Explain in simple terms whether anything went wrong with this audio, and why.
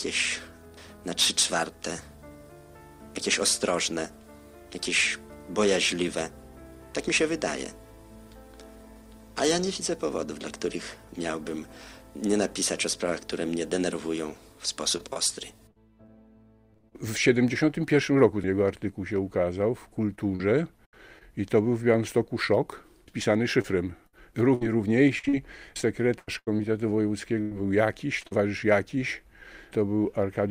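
Repeated packet loss (robotic sound) occurs three times: 14.97 to 16.93 s, 20.15 to 21.23 s, and 23.05 to 28.33 s. Small pieces of sound went missing. Each hole was patched by stretching the last sound. This makes the audio choppy and robotic.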